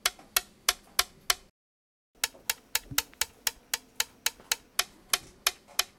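An everyday-sound recording goes silent from 1.50 to 2.15 s, a playback stall of about 650 ms, likely the player running short of data. Unlike a dropout, it resumes where it halted. A catch-up at higher speed follows from 2.15 to 4.75 s: it runs 1.25 times faster and sits about four semitones higher, then drops back, which tells it apart from a plain pitch shift.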